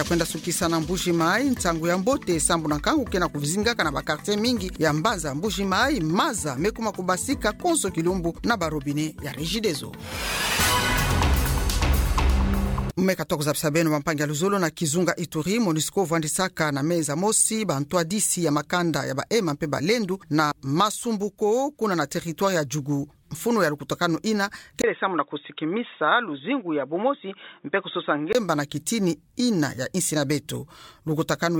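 From 24.82 to 28.35 s the sound turns dull and boxy, with nothing above 3.8 kHz, after a brief 20 ms gap: likely an input switched to a poorer device.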